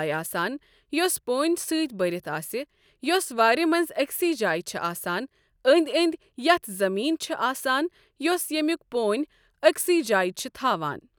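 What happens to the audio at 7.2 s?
At 7.2 s the speech carries on intact, with no dropout, click, distortion or other fault at that moment.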